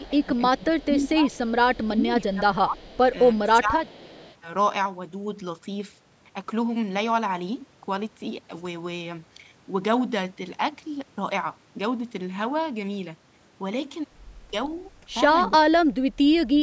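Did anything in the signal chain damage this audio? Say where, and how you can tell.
Yes. In the call processing, the far end's echo canceller likely left residual loudspeaker pickup uncancelled. An echo leak sits about 324 ms behind the speech, roughly 30 dB down, from 0.00 to 1.86 s, 2.78 to 2.99 s and 3.84 to 4.36 s, heard as a faint, delayed ghost of the sound.

The same echo control likely misjudged simultaneous talk and attenuated the near talker, causing speech suppressed in double talk. From 0.09 to 4.24 s, about three seconds of speech dip by up to roughly 20 dB. From 15.49 s to the end, under a second drops by up to roughly 30 dB.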